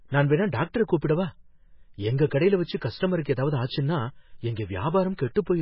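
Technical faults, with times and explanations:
Throughout, MP3 compression: nothing survives above 5.6 kHz, and the sound turns watery and swirly. This is likely heavy MP3 coding at a very low bitrate, around 16 kbps.
2.77 to 2.81 s, pre-echo: a short hiss runs about 42 ms ahead of a sharp attack. Quantisation noise spread across the block fills the quiet gap, softening the attack.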